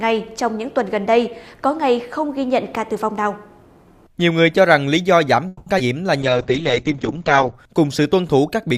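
At 5.47 s the audio stalls. The last sound is carried on by concealment for about 190 ms until 5.68 s, and then playback resumes where it stopped with nothing lost. This call audio freeze is likely packets held up in transit, which let the jitter buffer run empty.

At 5.78 to 5.81 s comes a skip ahead. Around 70 ms of audio is dropped, with only a 10 ms fill at the join, so playback jumps forward almost directly. This is discarded audio, either lost in transit or thrown out by an overflowing jitter buffer, while later packets were already waiting.

From 5.86 to 6.31 s a jitter buffer slow-down follows. The receiver repeats small segments to rebuild its reserve, adding 50 ms, so the audio runs at 91% speed with unchanged pitch and sounds drawn out.

From 6.23 to 7.60 s there is a call bitrate drop. The bandwidth estimate fell and the encoder went from 64 kbps to 8 kbps, holding the lowest rate for about 1.3 s. 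Coarser coding and a bandwidth cut from 20 kHz to 8 kHz make the audio rough and muffled, and it clears by 7.60 s.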